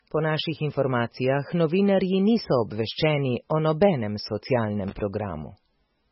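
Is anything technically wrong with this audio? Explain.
Yes, two faults. Throughout the speech, the sound is dull and watery, with nothing above 5.6 kHz, swirling, metallic sibilants and smeared attacks. This is likely heavy MP3 compression at a very low bitrate, around 16 kbps, which cuts the treble and zeroes weak frequency lines that flicker from frame to frame.

From 4.88 to 5.00 s, a short, irregular burst of scratchy crackle cuts through. This is loose connector crackle, a worn or dirty contact repeatedly making and breaking, chopping the signal into rough fragments.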